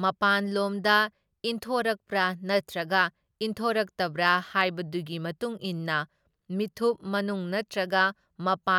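No technical faults can be heard anywhere in it.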